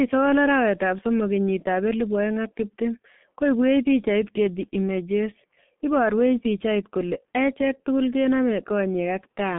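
Heavy G.723.1 codec damage throughout leaves speech muffled and hoarse, consistent with a 6.3 kbit/s stream. The spectrogram shows energy only between 150 Hz and 3.5 kHz, with nothing above 3.8 kHz.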